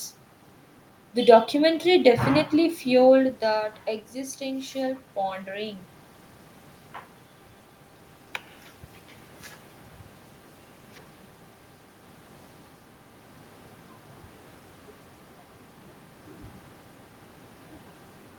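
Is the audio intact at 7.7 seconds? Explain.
Yes, at 7.7 seconds the audio is intact, with no dropout, glitch or other system fault to be heard at that moment.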